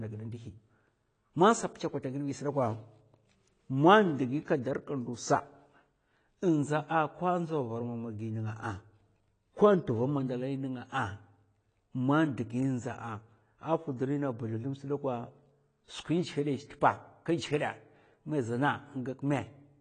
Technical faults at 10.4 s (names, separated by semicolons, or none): AAC compression